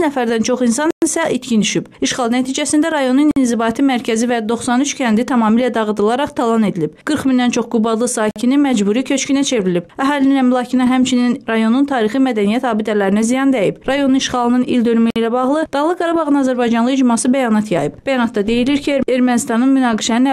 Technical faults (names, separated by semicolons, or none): Bluetooth stall